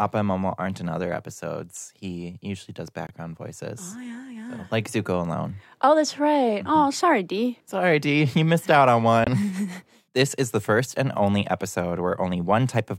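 Two silences cut into the speech, at 3.07 to 3.11 s after "episodes he usually does" and at 9.24 to 9.28 s after "missed out on". Each time the speech resumes as though it had kept playing. These are Bluetooth dropouts, likely from audio packets that reached the headphones too late and were discarded.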